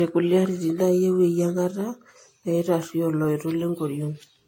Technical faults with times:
0.00-4.47 generation loss

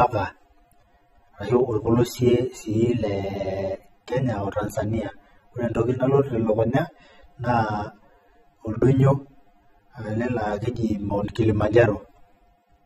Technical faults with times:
0.00-12.85 AAC compression
10.22 dropped samples

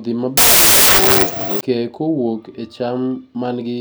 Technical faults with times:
0.37-1.61 wrong sample width

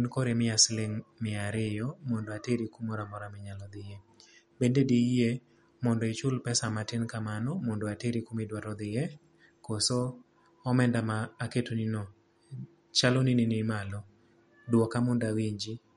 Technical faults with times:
0.00-15.96 MP3 compression

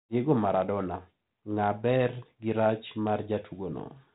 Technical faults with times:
none

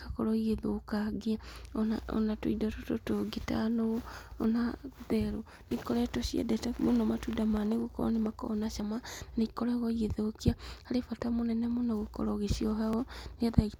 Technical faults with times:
2.72 dropped buffer (overrun)
8.80 dropped buffer (overrun)
12.93 dropped buffer (overrun)

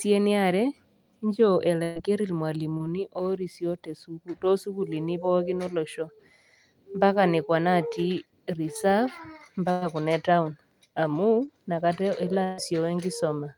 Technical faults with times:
1.83-1.97 burst of packet loss
2.77-2.81 short concealed packet loss
9.71-9.83 burst of packet loss
11.45-11.49 short concealed packet loss
12.43-12.59 burst of packet loss

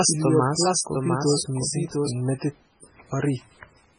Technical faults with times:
0.00-3.99 MP3 compression
0.00-2.10 doubled audio track

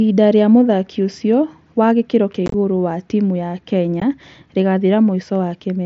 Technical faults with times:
2.46-2.54 unconcealed Bluetooth headset packet loss
4.00 unconcealed Bluetooth headset packet loss

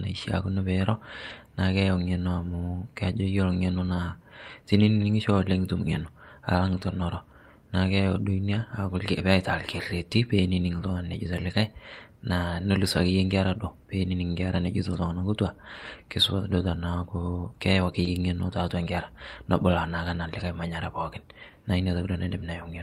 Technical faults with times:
1.29 lost packet rebuilt from error correction
18.03-18.07 short concealed packet loss
18.05 lost packet rebuilt from error correction

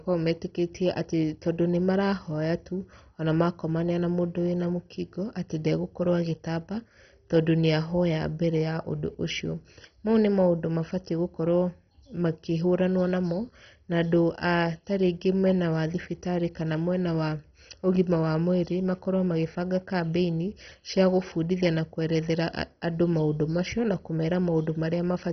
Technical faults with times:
0.00-25.32 MP2 compression

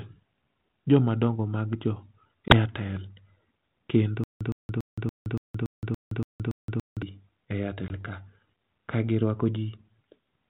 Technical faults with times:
2.48-2.57 packet loss on an ADPCM call
4.24-7.02 stutter with silent gaps
7.88-8.02 packet loss on an ADPCM call

